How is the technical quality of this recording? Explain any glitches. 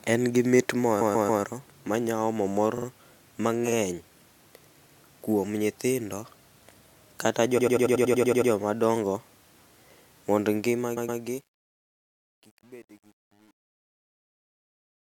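The recording has two kinds of fault: a stutter that recurs through the speech, and a grainy breakup during the closing fade.

Repeated frames occur five times. A block of compressed audio is played again, so the same sliver of speech restarts. The first, from 1.0 to 1.42 s, falls right after "gi mit": a roughly 139 ms block plays three extra times before "ma nya omo mor". The second, from 2.77 to 2.86 s, follows "ma nya omo mor" and repeats a 46 ms block twice. The third, from 4.86 to 4.99 s, comes just before "kuom nyithindo" and repeats a 139 ms block once. The fourth and longest, from 7.57 to 8.5 s, loops a 93 ms block ten times. The fifth, from 10.96 to 11.19 s, repeats a 116 ms block twice. A dropout loses material, but this fault loses nothing; it lengthens the audio by the replayed time, nearly a second in the fourth event.

Truncation distortion on a fade runs from 10.56 s to the end. 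The fade-out itself, starting around 10.56 s, is smooth as a level ramp. However, the gain stage keeps too few bits and adds no dither, which points to roughly 9-bit resolution. As the level drops toward the smallest step, the waveform collapses into coarse square steps. From about 11.41 s onward the tail turns gritty. Background noise would be a steady hiss, but this grit rises and falls with the speech.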